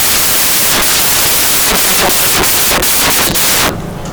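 Loud, hissing white noise fills the whole speech recording: samples built from the wrong bytes, with low-order bits misread as the largest part of each value.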